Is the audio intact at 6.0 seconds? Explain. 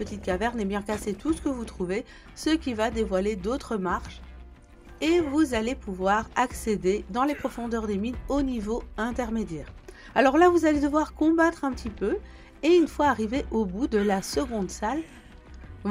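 Yes, at 6.0 seconds the audio plays through cleanly, with no dropout, click, distortion or other fault to be heard at that moment.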